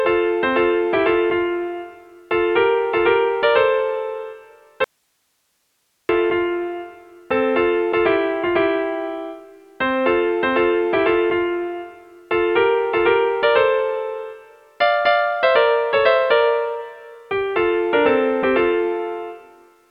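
At 4.84 s there's an audio dropout to a faint residue: the sound cuts out abruptly for about 1.25 s, leaving only hiss roughly 50 dB down, likely a brief signal loss upstream.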